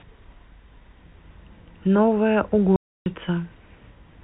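From 2.76 to 3.06 s the speech drops into a 300 ms hole of dead silence with hard edges. That's packet loss filled with silence, which fits ten lost 30 ms packets.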